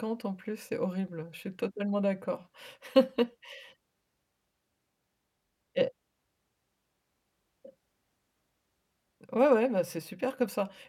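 No technical faults are audible anywhere in the recording.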